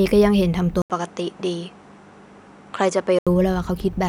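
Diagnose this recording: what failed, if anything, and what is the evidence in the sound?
At 0.82 s the speech drops out for about 80 ms, then returns duller, with nothing above 10.5 kHz, until it opens up again at 3.27 s. This is likely the input switched to a poorer device at the driver stage, with a narrower-band microphone taking over mid-recording. Loudness stays about the same, but a faint new noise floor appears roughly 50 dB down. On a spectrogram, a gap is followed by a flat ceiling at 10.5 kHz; the waveform shows a short break.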